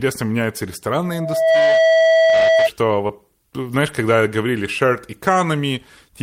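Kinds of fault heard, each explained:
Loudspeaker feedback squeal: mic-to-speaker loop gain exceeds one at 651 Hz; from 1.04 s that tone swells within about half a second, holding roughly 5 dB above speech until 2.69 s.
Short concealed packet loss: 20 ms of audio missed the decoder; between 3.07 and 3.11 s the receiver extends the preceding sound for 17 ms, producing a brief smear.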